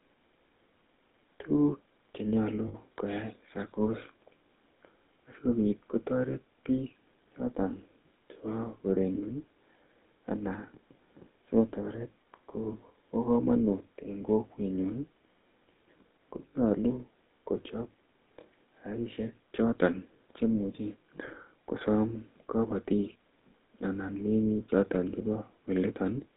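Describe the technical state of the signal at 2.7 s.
At 2.7 s there are lost GSM frames, from 2.68 to 2.75 s, just after "che nyalu". The decoder had no valid data for about 60 ms, which fits three 20 ms frames. It filled the gap by reusing the last good frame's settings. The result is a brief rough, metallic ring where the sound should continue. The gap is short, so the hold ends before it fades to silence.

Underneath, the GSM full-rate codec is at work, at 13 kbps. It rebuilds the sound from a vocal-tract model driven by a coarse pulse train. This gives a buzzy, gravelly roughness that is plainly audible. The band is confined to roughly 200 Hz to 3.7 kHz, so the sound is thin, with no low body and no upper brightness.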